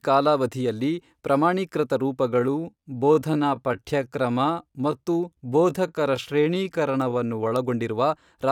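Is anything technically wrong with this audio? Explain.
Yes. A time-stretched section runs from 2.25 s to 7.57 s of the speech. Across that span the pace drops abruptly to about 0.74 times normal speed while the pitch stays where it was. This is likely time-stretching software lengthening the passage to fit a duration, filling the extra time by repeating short slices of the waveform. The result drags, with syllables dragged out, before normal pace returns at 7.57 s.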